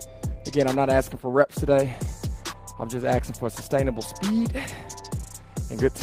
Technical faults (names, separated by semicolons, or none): none